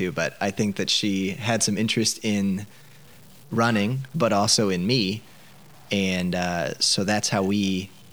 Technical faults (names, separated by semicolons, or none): low bit depth without dither